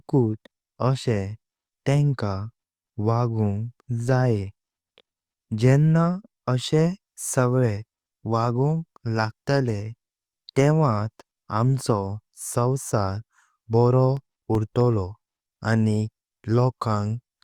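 From 14.17 to 15.06 s, eight CD scratch ticks arrive at a steady rate near nine per second. Each marks one disc rotation where damage exceeded error correction and the player patched the gap, leaving dropouts of a few milliseconds. Unlike random clicks, they are evenly spaced and uneven in strength.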